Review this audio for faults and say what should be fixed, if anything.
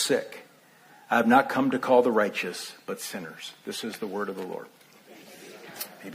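Nothing needs fixing: the signal holds together technically throughout, with no faults to report.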